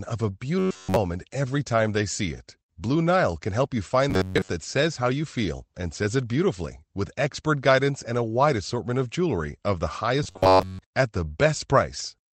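Robotic sound from repeated short buffers occurs at 0.59–0.96 s, after "of a", at 4.10–4.48 s, after "can help you", and at 10.23–10.79 s, after "of jewelry of the". It is likely caused by late audio being replaced by a repeated slice of roughly 10.7 ms, producing a fixed 93.8 Hz metallic buzz. That repetition covers the whole first event and most of the other two.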